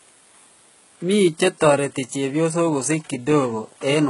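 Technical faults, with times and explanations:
throughout, HE-AAC compression: s sounds turn gritty and metallic, nothing above 11.1 kHz; likely HE-AAC near 12 kbps rebuilding treble from copied lower bands.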